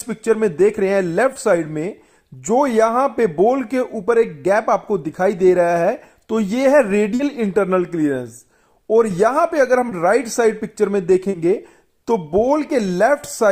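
At 1.33 to 1.37 s, 7.15 to 7.21 s, 9.89 to 9.93 s and 11.29 to 11.35 s you get short concealed packet loss. Chunks of about 20, 40, 20 and 40 ms missed the decoder, so the receiver patched each gap by extending the sound just before it and then fading back into the real signal. Each one comes across as a quick smear or tiny wobble.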